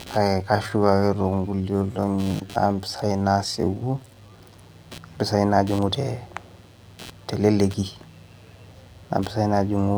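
Right from the start there's computer activity noise under the whole speech clip, a buzzy, scratchy pulsing at around 150 Hz and roughly 25 dB below the voice. It rises and falls with the machine's load rather than the talking, because the processor's shifting current is getting into the audio ground.

From 0 to 4.42 s the speech drags at about two-thirds pace while the pitch stays put. That's likely a time-stretched section, where software slowed the audio and filled the gap by repeating tiny slices.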